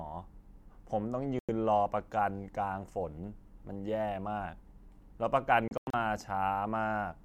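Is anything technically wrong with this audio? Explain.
Yes, there are two digital broadcast dropouts in this speech. At 1.39 to 1.49 s the sound drops out for about 96 ms, which fits a few lost frames. At 5.68 to 5.94 s it breaks up into several short holes, about 160 ms of gaps in total, the longest about 96 ms. The receiver lost the signal or got corrupted frames, muted until clean ones came back, and the audio from those moments is simply gone.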